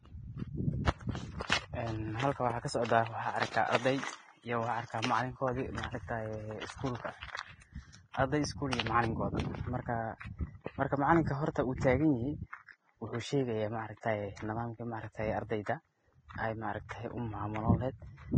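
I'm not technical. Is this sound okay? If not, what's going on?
No, the speech sounds hissy and grainy all the way through, with fuzzy treble and smeared consonants, most likely from heavy Vorbis compression squeezing it too hard.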